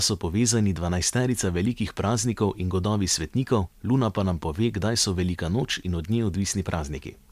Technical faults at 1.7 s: none

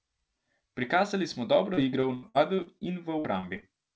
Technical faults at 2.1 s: repeated packet loss (robotic sound)

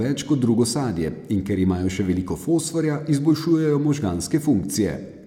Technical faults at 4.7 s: none

